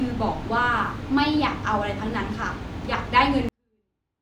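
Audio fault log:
3.49–4.22 s, 24-bit alignment error (too quiet): the speech stays clean and undistorted but falls away abruptly at 3.49 s, dropping by about 48 dB and running almost inaudibly to the end of the clip. Nothing smears or crackles; the level simply collapses. The samples were held as 24-bit values in the low bytes of each 32-bit word, and reading them as full 32-bit integers scales every value down by 256, an 8-bit shift that costs exactly that much gain.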